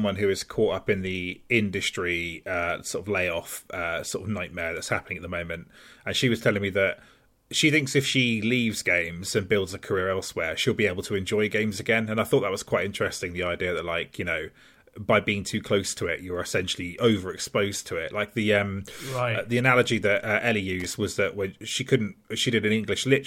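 At 20.80 to 20.93 s, just before "was that when she", a loose connector crackle cuts in. A worn contact making and breaking chops the speech into an irregular scratchy burst. Its ragged, uneven texture, unlike a single clean digital click, marks it.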